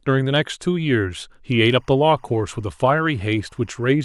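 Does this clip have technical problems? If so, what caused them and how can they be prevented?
Yes. From 1.66 to 3.95 s a faint chirping warble sits below the speech. This is timecode bleed, 24 fps linear timecode leaking from an adjacent line. Unlike a steady whistle, it flips between two pitches near 1 and 2 kHz. Route timecode on shielded cables away from audio.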